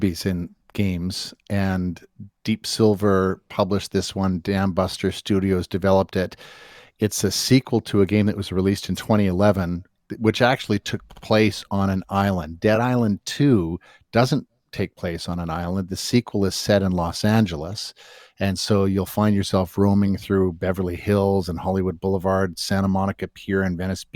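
At 11.11 to 11.23 s, just after "which actually took" and before "on an island", there are repeated frames. A 60 ms block of compressed audio, which fits three 20 ms frames, plays twice more. That is a short stutter adding 120 ms. At 12.75 to 12.77 s a single 20 ms block repeats once. At 20.07 to 20.09 s, after "so you'll find yourself", another 20 ms block repeats once.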